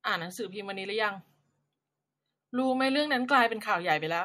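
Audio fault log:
No faults heard anywhere in this speech recording.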